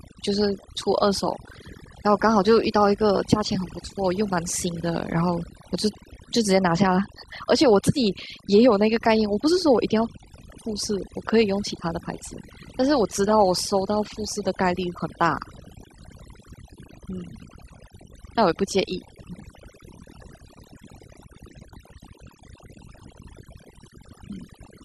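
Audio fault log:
Throughout: overdone noise removal. Aggressive reduction gates bands near the noise estimate, leaving a lowered background broken into twinkling specks, and quiet parts of the speech removed. Spectrogram shows patchy, flickering holes.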